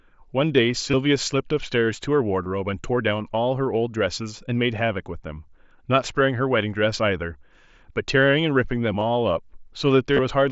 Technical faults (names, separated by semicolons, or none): concealed Bluetooth headset packet loss